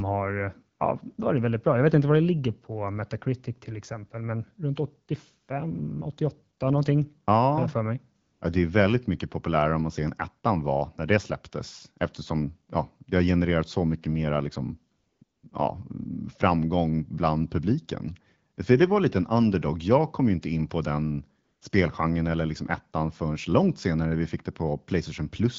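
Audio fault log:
8.21 to 21.61 s: AMR comfort noise, six gaps at 8.21–8.41 s, 14.95–15.21 s, 15.23–15.43 s, 15.5 s, 18.56 s and 21.43–21.61 s. The sender's voice activity detection judged these moments silent and dropped speech frames for 20 to 260 ms, and the receiver filled them with smooth synthetic noise built from a rough level and spectrum estimate. The real background switches out after "så mycket mera liksom", "framgång bland publiken" and "inte in på den", returning before "spelgenren eller liksom ettan". The AMR-WB link carrying the speech sounds clear, consistent with a rate around 12.65 kbit/s, with light coding texture.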